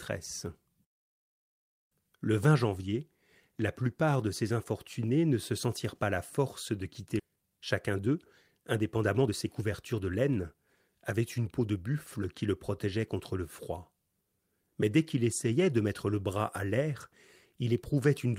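Right after "la force de quitter", at 7.19 s, the speech jumps forward with no gap, and the two sides are joined almost directly. This is a skip ahead: about a second of audio was dropped, either in transit or by the jitter buffer overflowing, while later audio was already queued. Playback simply resumed from the later material, so the missing stretch leaves no pause behind it.

Soon after, from 7.29 to 8.16 s, the speech sounds hurried but keeps its pitch, running at 109% speed. A second, longer stretch follows from 8.58 to 12.47 s at 110%, ending just before "le protégeait contre le". Both are jitter buffer speed-up. The buffer was holding more audio than its target, so the receiver repeatedly cut out short pieces one or a few pitch periods long. That removed roughly a tenth of a second in the first stretch and roughly 0.4 s in the second.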